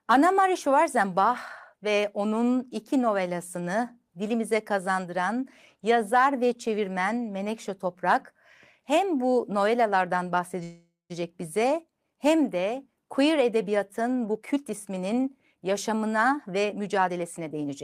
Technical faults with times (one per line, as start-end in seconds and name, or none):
10.63-11.12 call audio freeze
14.26-17.82 jitter buffer speed-up